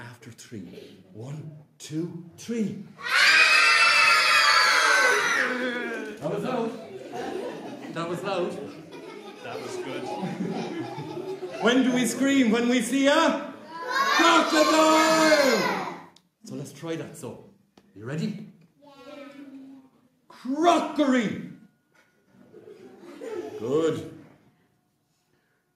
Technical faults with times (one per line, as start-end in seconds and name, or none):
none